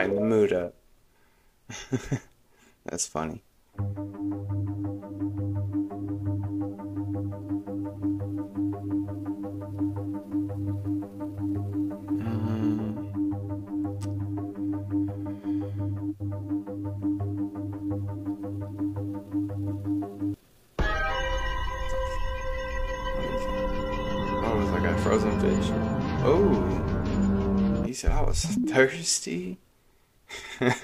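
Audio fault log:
No faults detected in the audio.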